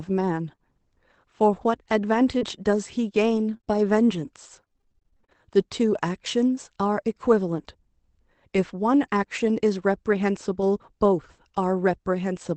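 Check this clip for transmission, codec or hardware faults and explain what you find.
Yes, there are three transmission faults, all packet-loss related, clustered near the start and through the middle of this speech clip. The Opus call path itself adds its usual coding grain.

Lost packet rebuilt from error correction, 0.43 to 0.53 s: a few separate packets went missing, but each following packet carried a low-bitrate backup copy, which Opus decoded in place of the lost audio. That covers roughly 60 ms, which fits about three lost packets. There's no hole, just a brief stretch where the speech turns rougher and noisier than its surroundings.

Short concealed packet loss, 0.55 to 0.60 s: right after that, something arrived too late and no backup copy was available. The decoder bridged about 25 ms by extending the last sound, carrying its pitch if voiced or shaping noise if not, then crossfaded back into real audio. 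You hear it as a quick smear or tiny wobble, and a short consonant can get swallowed.

Repeated packet loss (robotic sound), 2.38 to 5.46 s: across these three seconds the loss keeps recurring, with over twenty separate holes, the longest about 32 ms. Each one is patched by continuing the previous sound, and the next drop follows before things settle. Around 15% of the stretch is concealed, with roughly a third of a second rebuilt. The result is choppy speech with bits clipped out.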